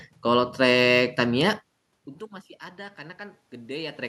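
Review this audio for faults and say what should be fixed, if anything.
Automatic gain rising from 2.76 to 4.03 s: after the input level dropped by about 23 dB, the gain control treated the signal as too quiet and raised its gain by about 4 dB over more than a second, so the voice and room noise swell together. A slower gain response with a hold period, or a steadier distance from the microphone, would prevent it.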